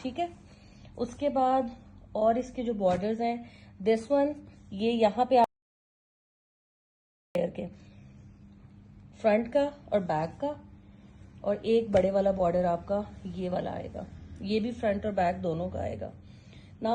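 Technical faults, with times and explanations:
5.44–7.35 s, audio dropout to silence: the input was likely lost while recording carried on writing silence, so the sound cuts abruptly to dead silence, with no room tone, for 1.91 s.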